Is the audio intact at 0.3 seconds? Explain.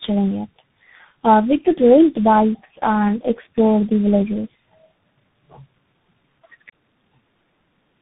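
No. At 0.3 s the speech is already in tandem speech coding, present throughout. It passed through about four speech codecs in a row, likely low-rate CELP coders and CVSD, each re-encoding the last one's damaged output. The result is muffled, with nothing above 3.8 kHz, and rough and warbly, more so than any single low-bitrate codec would sound.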